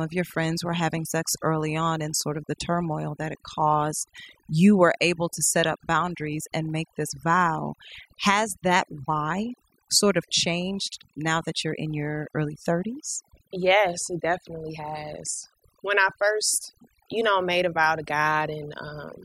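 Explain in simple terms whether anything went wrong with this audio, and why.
Yes, this speech has overdone noise removal from start to finish. A noise-cleaning tool was pushed too hard, so it shuts off whole slices of sound it mistakes for hiss, including softer parts of the voice. The background in the pauses drops away and breaks up into twinkling, warbling specks.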